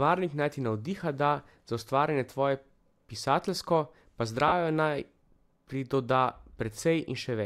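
At 4.48 s the speech briefly turns into a noisy smear lasting about 40 ms, which fits four 10 ms frames, a sign of lost LE Audio frames. The LC3 decoder refilled the gap from the previous spectrum with scrambled signs, so unlike a clean dropout there is no silent hole, just blurred noise.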